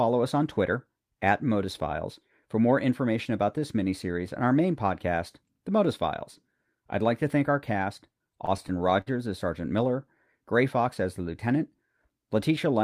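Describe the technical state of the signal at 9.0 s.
At 9.0 s the signal is inside a run of repeated stalls (stutter), 8.13 to 9.08 s, just after "to thank our cast". Packets arrived late, draining the jitter buffer; the receiver stretched the last sound across nine brief holds, longest 53 ms, so nothing drops out but the speech drags and stutters.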